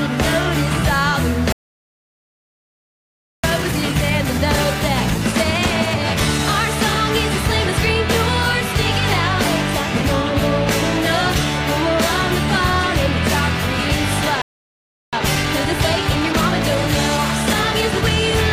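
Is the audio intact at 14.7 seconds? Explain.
No. At 14.7 s the audio is inside a playback stall running from 14.42 to 15.13 s, a silent gap of about 0.71 s where the sound halts mid-flow. The likely cause is the player running out of buffered data or its thread being blocked.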